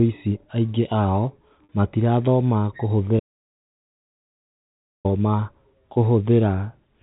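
A speech recording carried over a telephone-band channel whose G.711-style coding cuts everything above 4 kHz, it has two kinds of fault. The first is packet loss with pitch repetition, at 1.64 s and at 5.94 s. The first gap lasts 50 ms, the second 20 ms, which fits audio sent in 10 ms packets. In each gap the receiver replays the last pitch cycle to fill the hole. The result is a brief held, buzzy tone before normal speech resumes. The second fault is an audio dropout to silence, from 3.20 s to 5.05 s, about 1.85 s in all. The sound stops mid-flow and the gap is dead silence, with no room tone at all. Whatever was said there is gone. The likely cause is the input signal being lost upstream, from a disconnected device, a failed link or an accidental mute, while the recorder kept writing silence.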